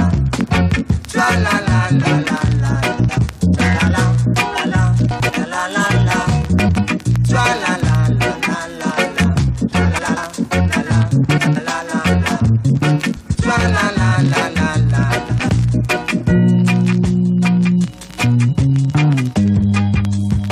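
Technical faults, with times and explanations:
2.99, 5.11, 6.59, 9.98, 11.37, 13.16 and 15.30 s: frames out of order. Each 0.2 s stretch flutters garbled because two neighbouring blocks of about 93 ms played swapped.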